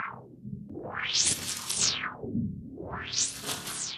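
Nothing in these sounds gives away a technical problem; the audio just runs along on its own without anything catching the ear.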